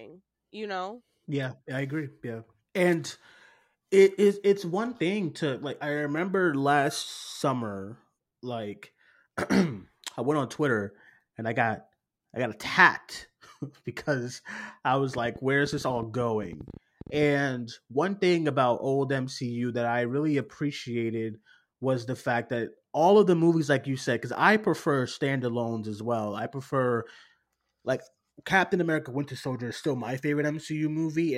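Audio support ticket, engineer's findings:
Train of clicks, 15.18 s to 17.24 s, starting just after "because i was". Around thirty similar-shaped clicks at about 11.7 per second, unevenly spaced, peaking roughly level with the speech and audible across gaps too. Likely cause: interference from nearby equipment or a faulty connection or power supply injecting repeated pulses into the signal path.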